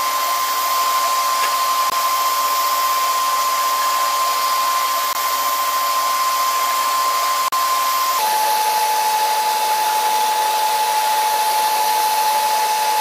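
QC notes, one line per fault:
0.00–8.19 s, section at the wrong speed: Playback likely ran against a mismatched clock, pushing this stretch about 1.21 times faster than recorded. Speed and pitch rise together, so the sound is hurried and sits roughly three semitones high until normal pace returns at 8.19 s.
1.90–1.92 s, 5.13–5.15 s, 7.48–7.53 s, Bluetooth dropout: Wireless audio data likely arrived too late and was discarded, leaving abrupt silent gaps of about 20 ms, 20 ms and 40 ms. The last fits two lost packets. Each time, the sound resumes further on, as though it had kept playing.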